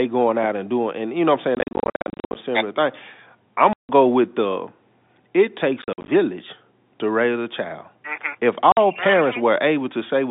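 Speech over a G.711 telephone line, band-limited to about 200 Hz to 3.7 kHz, is broken by packet loss filled with silence: hard-edged dropouts, scattered between 1.55 and 2.35 s and between 5.82 and 6.08 s, with solid gaps at 3.73–3.89 s and 8.72–8.77 s. These show as flat silent stretches in the waveform and vertical blank columns on a spectrogram, sized in steps that fit 10 ms packets.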